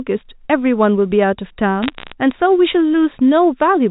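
From 1.83 to 2.12 s the speech picks up bit errors on a digital phone line. Over that stretch about four bits in every thousand flip. Each flipped bit changes a single sample. When a high-order bit, or the sign bit of a loud sample, is hit, that sample jumps sharply and makes a tick. The ticks come thick enough to sound like a brief crackle laid over the speech. The speech itself is unchanged beneath it. The telephone coding elsewhere fits G.711 mu-law at 64 kbps, with nothing above 4 kHz.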